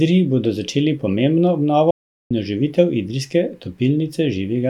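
At 1.91 s the speech cuts off abruptly. What follows is an audio dropout to silence lasting until 2.31 s. That is about 0.40 s of silence. No room tone or hiss remains in the gap, so the silence sounds dead rather than quiet. The input signal was likely lost for that moment while recording carried on. The speech then resumes mid-flow, and whatever was said in between is missing.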